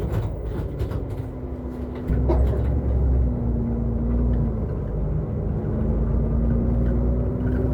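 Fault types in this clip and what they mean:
skip ahead: At 2.1 s the audio jumps forward with no gap, as roughly a second of sound was dropped while later audio was already waiting. The two sides are joined almost directly. Playback then runs about a second earlier than before.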